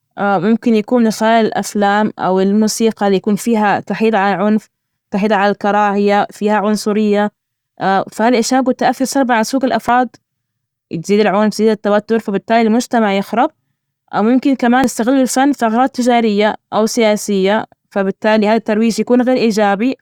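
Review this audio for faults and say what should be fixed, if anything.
Audio missing between chunks at 9.89 s, right after "تؤثر سلبا على سلوك", and at 14.84 s, between "أو ممكن" and "يستغل الفن ثغرات تجارية". At each point the speech jumps forward abruptly. Roughly 50 ms of sound is gone, and the two sides are butted together with no gap of silence. The two skips fall about 5 s apart. That spacing fits a recorder or processor working in 5-second chunks, likely losing a short stretch each time it closes one chunk and opens the next.

To prevent it, hand off between chunks with a double buffer or an overlap, so the next chunk is already capturing before the previous one closes.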